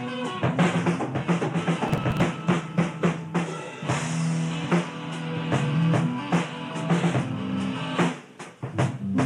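From 1.88 to 2.22 s the music breaks into a gritty burst of crackle, then clears. This is processor overload crackle: the processor missed around fifteen deadlines for short buffers of roughly 5 ms, and each one was skipped, leaving a hard-edged gap.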